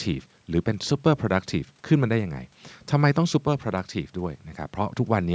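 Speech through ordinary call microphone processing, with the lowest bass trimmed by its high-pass filter and nothing above 8 kHz, and no technical fault to report.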